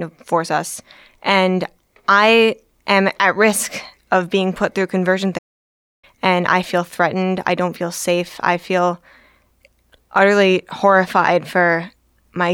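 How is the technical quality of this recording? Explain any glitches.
The recording has one clear glitch, a playback stall partway through the speech. From 5.38 s to 6.04 s, the sound cuts out completely for about 0.65 s. The speech stops in mid-flow and the gap is plain silence. The cause is likely a player that ran short of buffered data, or whose audio thread was blocked, so nothing reached the output until it recovered. The speech then resumes.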